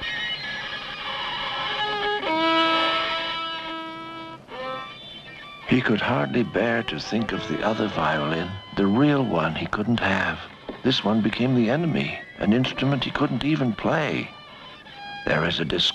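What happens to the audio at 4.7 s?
Nothing goes wrong at 4.7 s; the audio plays through that moment intact, with no dropout, click or other fault.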